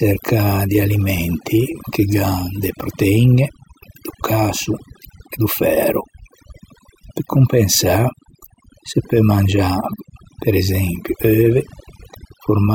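Overdone noise removal runs throughout: an overly aggressive reducer suppresses bands near its noise estimate, leaving near-silent, twinkling gaps and stripping away quiet parts of the voice.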